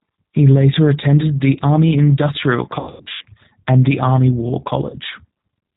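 G.729 codec damage runs through the whole of this speech clip and is plainly audible. The band stops at 4 kHz, and the voice has the slightly rough, synthetic grain of a coder that rebuilds each 10 ms frame from a vocal tract filter, a pitch predictor and a handful of pulses. That character fits the 8 kbit/s G.729A variant. VoIP packet loss concealed by the speech codec appears from 2.79 to 3.26 s, just before "and the". About 300 ms of audio is missing, scattered over 420 ms with the longest gap near 90 ms, which points to around ten lost packets. Through each gap the decoder stretches the last pitch and filter into a fading buzzy tone or coloured noise, and the voice stays weak briefly after the audio returns. A second, single dropout at 4.90 to 4.96 s removes about 30 ms and is covered the same way.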